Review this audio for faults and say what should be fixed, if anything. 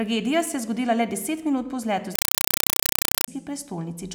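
From 2.15 to 3.28 s, right after "deset minut po vzletu", the speech becomes chattering static: a compressed stream played as audio. Data bursts about 4 ms long repeat 31.25 times a second, which fits an undecoded 192 kbps AC-3 stream. That steady rhythmic chatter, rather than a continuous hiss, distinguishes it from broadband noise. To prevent it, set the S/PDIF or HDMI output to decoded PCM, or make sure the receiving device decodes Dolby Digital.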